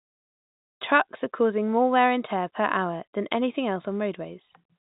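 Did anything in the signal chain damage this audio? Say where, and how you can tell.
No, the speech passes through the signal chain undamaged, and the only mark of the chain is its G.711 telephone coding, heard as a band that stops near 3.8 kHz with a faint level-following hiss, which fits a 64 kbit/s mu-law phone path.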